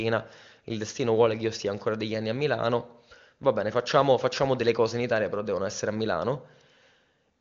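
No technical faults are audible.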